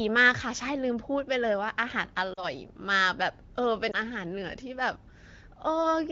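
Lost AMR speech frames at 2.34 to 2.47 s and 3.92 to 3.97 s: the decoder repeated the last good settings with falling gain, so the speech drops to near silence in the first and briefly dips or warbles in the second.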